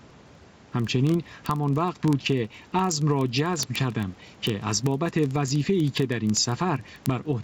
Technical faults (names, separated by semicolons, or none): gain pumping; word clock ticks